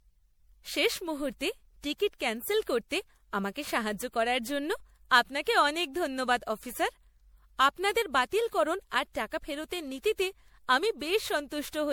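Generation loss runs through the whole speech clip. The sound is swirly and hollow, with a smeared, watery texture. Consonant attacks blur rather than snap. Content stops at about 20.8 kHz. The damage is heavier than a single MP3 pass would leave at what sounds like 96 kbit/s. The likely cause is repeated re-encoding, around seven passes. Each pass quantised again on a shifted frame grid, so noise and spectral holes piled up.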